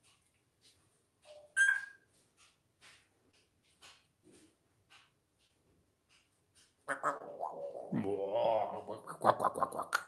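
A burst of packet loss at 1.61 to 1.69 s drops about 60 ms, which the receiver bridges by prolonging the last sound as a fading hold before skipping ahead. Short concealed packet loss follows at 3.31, 5.47, 7.17 and 8.56 s. Each loses about 20 ms, patched by extending the preceding sound, heard as a brief smear or wobble through an Opus call path whose top end stops near 12 kHz.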